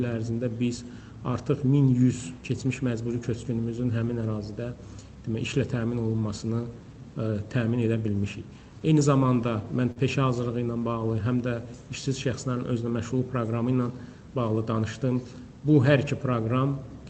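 From 8.79 to 9.98 s there's a patch of scattered short gaps: a handful of lost or late packets, the longest only a few tens of milliseconds, each filled by stretching the preceding sound. You hear little ticks and smears while the sound stays clear.

Next, between 10.56 and 12.24 s, the jitter buffer slow-down kicks in. The receiver needed more reserve, so it kept repeating tiny slices, adding 83 ms and running at 96% speed. Pitch stays put, but things feel slightly drawn out.

Finally, from 14.21 to 14.80 s, there's a jitter buffer speed-up. The buffer was overfull, so the receiver trimmed out short pieces, around 70 ms in total, pushing playback to 112%. It sounds briefly hurried at the same pitch, over the call path's 8 kHz top end, which fits Opus at about 24 kbps.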